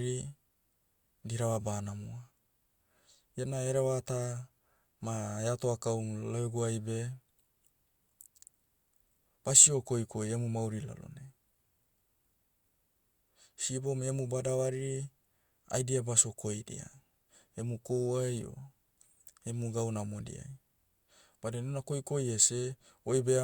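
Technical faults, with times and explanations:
No technical faults detected.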